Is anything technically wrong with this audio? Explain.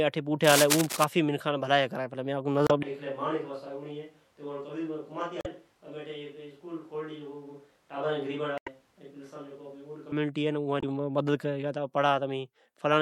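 Yes, several faults are audible in this speech clip.

From 0.44 to 1.04 s, dense, uneven scratching and rustling sits over the speech, nearly as loud as the voice itself. This is likely cable scratch noise: a worn cable, connector or control being moved, its contact resistance fluctuating rapidly and injecting bursts of noise.

At 2.65–2.71 s, 5.38–5.46 s, 8.55–8.68 s and 10.78–10.84 s, there is damaged data in a compressed stream. Corrupted frames make the decoder misread them and lose sync while hunting for the next valid header, so each spot produces a brief chirp or blip.

From 2.83 to 10.12 s, the voice abruptly turns roomy and hollow, with thinner bass, roughly 10 dB less level, and room noise rising to around 30 dB below the speech. This points to a likely switch to a distant microphone after the close one dropped out. The sound snaps back just as suddenly at the end.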